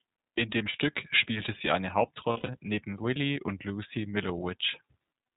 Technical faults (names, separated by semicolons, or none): iLBC codec; lost iLBC frames